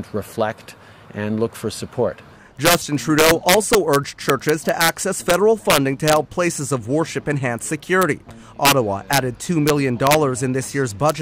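Integer overflow runs throughout: with the signal driven about 6 dB past full scale, the loudest peaks, a tiny fraction of samples, wrap to the opposite sign rather than flattening. Unlike clipping's dull buzz, each wrapped peak snaps as a sharp, violent crack.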